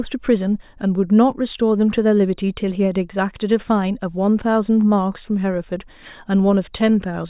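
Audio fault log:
No audible faults detected.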